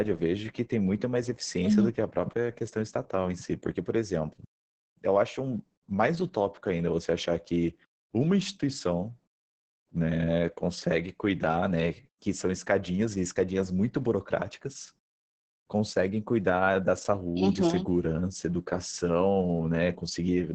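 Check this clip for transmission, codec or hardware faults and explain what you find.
One codec fault runs through the whole clip. Opus voice compression affects all of the speech. The coder is working in its speech-oriented SILK mode at wideband, which fits a low bitrate around 10 kbps. The excitation is coded coarsely, so the voice sounds muffled, hoarse and slightly robotic.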